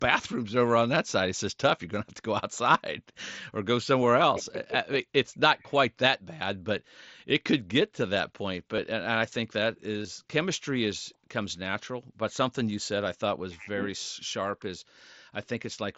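Speech recorded through a wideband Bluetooth headset, with concealed Bluetooth headset packet loss: packets dropped at 4.49 s after "or go somewhere else", at 8.76 s after "get to that point", and at 10.02 to 10.05 s before "chemistry is comes natural". The receiver filled each gap of 7.5, 15 and 22.5 ms by repeating the recent waveform; the single lost packet is nearly hidden, while the later runs leave brief buzzy patches, and the gaps grow longer across the three events.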